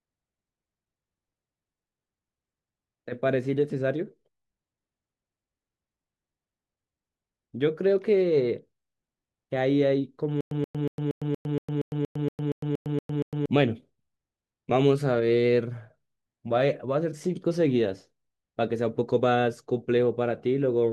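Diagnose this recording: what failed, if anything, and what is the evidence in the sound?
From 10.41 to 13.46 s the audio falls into a stutter with silent gaps. A burst of about 129 ms repeats 13 times. Each burst is followed by about 106 ms of digital silence, giving an even 235 ms cycle. The stage is playback or streaming. The player likely stalled on a buffer underrun, replaying its last fragment at each retry and then running empty. The audio meant for those three seconds is lost.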